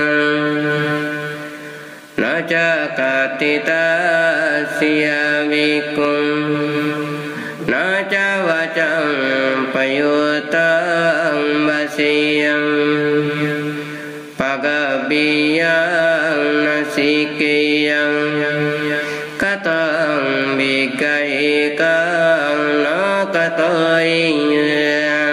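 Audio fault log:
Throughout, gain pumping: the gain swings by around 25 dB, so loud and soft passages sit squashed close together in level. The likely cause is input gain set far too high, with a fast limiter or compressor clamping down on each peak. On a waveform, peaks form a flat-topped band.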